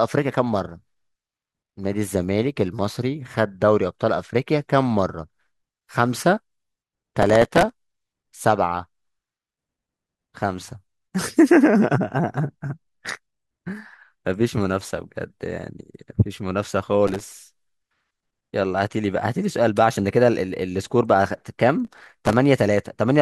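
Processor overload crackle at 7.22 to 7.81 s, 17.08 to 17.42 s and 21.85 to 22.33 s: dozens of very short buffers, each a millisecond or two, miss their deadlines, each replaying a scrap of old audio with hard edges, heard as gritty tearing over the speech.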